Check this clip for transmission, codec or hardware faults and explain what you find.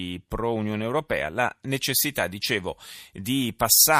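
One fault is present. From 1.65 s to the end, the speech turns thin, bright and hissy on sibilants, with treble about 8 dB stronger at 10 kHz than at 1 kHz. This is pre-emphasis left on: a CD-style 50/15 µs treble boost was never followed by its matching de-emphasis cut.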